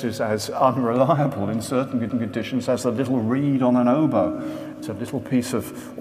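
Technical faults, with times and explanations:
2.09 s, CD skip: a brief tick marks the point where the laser loses its track on the disc's spiral and lands on another turn. The player mutes for only a few milliseconds while it recovers, then resumes from the new position, so the sound does not continue where it left off but jumps abruptly to a different place in the recording. The tick is the hard edge of that short mute.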